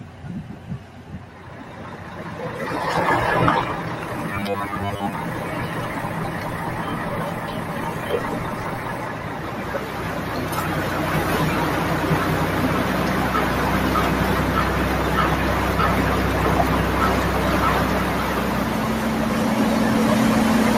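From 4.29 to 5.13 s the sound turns into a rigid, metallic buzz pitched at 100 Hz, only loosely following the underlying audio. This is robotic sound from repeated short buffers, likely caused by audio arriving too seldom, so a 10 ms chunk loops while most real audio is skipped.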